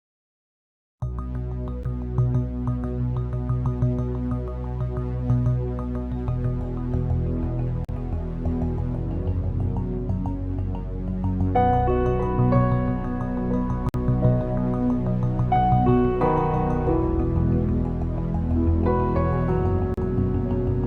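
At 1.83 s, 7.85 to 7.89 s, 13.89 to 13.94 s and 19.94 to 19.98 s there's a gap between stream segments. The segment timestamps don't quite meet, so the player pads silence, leaving hard-edged holes of 12 to 53 ms every 6 s.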